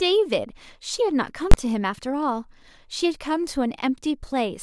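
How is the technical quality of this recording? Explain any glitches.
The speech is interrupted by one severe glitch. From 1.52 to 1.54 s there are invalid numbers at full scale. A calculation produced infinite or invalid values, and the output was pinned to maximum level for about 21 ms, which fits a 512-sample block. The block is so short that it is heard as a single loud bang.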